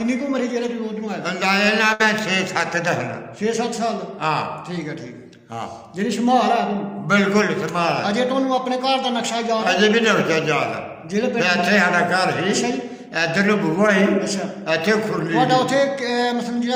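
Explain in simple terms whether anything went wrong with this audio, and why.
At 1.93 to 2.02 s the sound briefly smears into a held, fading sound, then jumps ahead: a burst of packet loss dropped about 60 ms.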